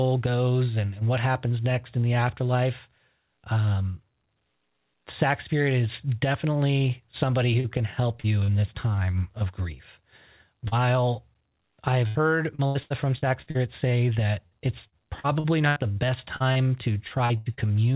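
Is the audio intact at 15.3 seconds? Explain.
No. At 15.3 s the audio sits inside a stretch of repeated packet loss (robotic sound) running from 14.47 to 17.60 s. Packets went missing twelve times, the longest hole 85 ms, and each was patched by extending the last sound, so about 17% of the span is concealed. Unlike a single lost packet, the patches recur closely, giving a choppy, robotic texture; unlike plain dropouts, the holes are filled rather than silent.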